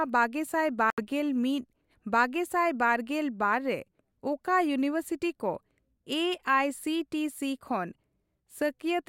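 Likely a Bluetooth dropout: at 0.90 s, packets seem not to reach the headphones in time, so the output goes silent until 1.01 s, roughly five frames' worth. The speech cuts out, then resumes further along, as if it had kept playing through the gap.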